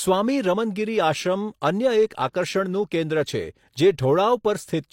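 At about 2.09 s a transform codec has coded a sharp onset that landed late in its block, and the quantisation noise budgeted for that loud moment has been spread across the whole block, including the near-silent stretch just ahead of the attack. The result is pre-echo: a short burst of hiss about 17 ms long arriving just before the onset in this speech, leaving the attack itself softened and smeared rather than crisp.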